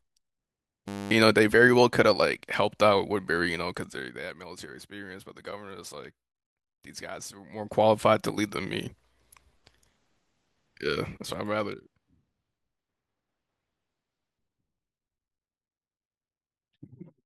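This speech clip has two technical faults. From 0.88 to 1.11 s there is a system hang loop. The system froze while the sound hardware kept replaying its ring buffer. A 10 ms slice of audio repeats 23 times. That gives a steady buzz at 100 Hz in place of the speech. The buzz is short and flat, with no natural movement. Around a fifth of a second of real audio is lost under it. From 7.38 to 7.81 s there is zipper noise. The level changes by roughly 15 dB in 2 dB steps, with no smoothing between them. There are about 30 steps each second. Each step puts a small click into the signal. Together they make a fast ticking that rides on the speech while the level moves.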